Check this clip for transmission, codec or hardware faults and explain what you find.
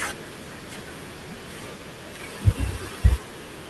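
I find no faults in this clip.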